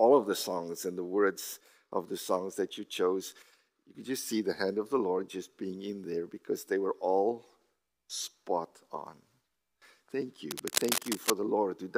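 From 10.51 to 11.30 s, a burst of cable scratch noise cuts across the sound. It lasts a little under a second. The noise is dense and uneven, a harsh scratching and rustling texture. It sits only slightly below the main signal. The likely cause is a worn cable, connector or control being moved. Its contact resistance jumps about rapidly and sprays crackle into the signal path.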